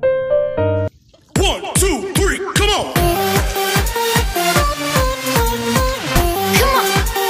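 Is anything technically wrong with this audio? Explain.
No, nothing technically wrong stood out on listening to this audio.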